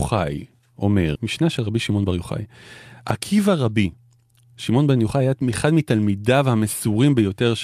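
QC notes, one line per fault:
1.15–1.17 s, skip ahead: about 0.4 s of speech is dropped and playback jumps straight to later waiting audio, joining both sides with no gap.
1.25–2.19 s, jitter buffer speed-up: an overfull buffer is drained by cutting short pitch-period slices repeatedly, so speech runs at 110% speed at unchanged pitch and sounds hurried.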